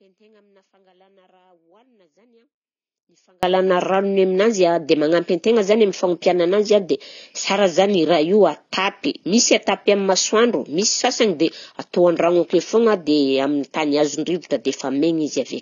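Audio dropout to a faint residue, from the very start to 3.43 s: the clip opens already inside the gap, so nothing of the speech arrives at its proper level until 3.43 s, when it snaps back abruptly rather than fading in. Throughout the gap only a faint trace of signal remains, roughly 40 dB below normal. The likely cause is a break in the source feed while the path downstream stayed live and kept passing that weak leakage.

AAC compression runs through the whole clip, and the speech has plainly audible codec damage. Nothing is present above 7 kHz, so the sound is dull and muffled, with smeared consonants and a warbling, fizzy texture on sibilants and sustained vowels. This points to AAC-LC at a low bitrate, around 24 kbps, where the encoder likely lowered its cut-off and starved the upper bands of bits, leaving spectral holes.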